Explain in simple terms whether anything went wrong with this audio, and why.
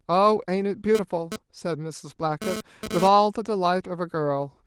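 From 0.95 to 3.08 s a harsh, raspy GSM phone buzz cuts in and out under the speech. A nearby 2G phone was sending data in bursts about 217 times a second, and the audio circuitry picked up those radio pulses as sound.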